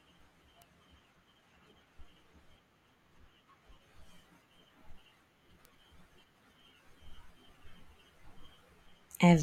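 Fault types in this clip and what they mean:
Bit error spike: a single flipped bit in one sample jumps the value by a power of two and straight back, giving two isolated sharp ticks at 0.62 s and 5.65 s, each one sample long, peaking around -30 dBFS and unrelated to the speech.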